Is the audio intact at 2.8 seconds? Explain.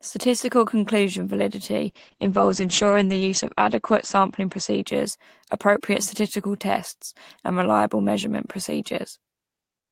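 No, a call bitrate drop runs from 1.91 to 5.59 s: the encoder fell from 32 to 10 kbps and cut bandwidth from 20 kHz to 8 kHz, so the sound turns coarse and muffled.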